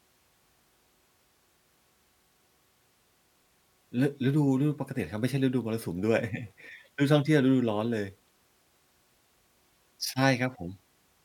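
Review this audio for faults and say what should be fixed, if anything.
Nothing to fix: no faults are audible anywhere in the speech, so no corrective or preventive action is needed.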